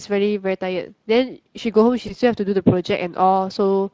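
Throughout, the Speex codec leaves the speech plainly hoarse and noisy. Its sparse excitation coding fits a setting near 20 kbps. From 2.07 to 2.14 s, VoIP packet loss concealed by the speech codec produces a brief stretched sound that fades. The decoder extends the last pitch, which fits one lost 20 ms frame.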